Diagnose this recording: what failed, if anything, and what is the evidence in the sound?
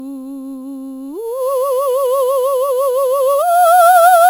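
Imaging from sample-and-hold upsampling at rate conversion, 11 to 48 kHz. Samples were repeated unfiltered. A metallic fizz mirrors the music from 5.5 to 11 kHz throughout, about 18 dB down.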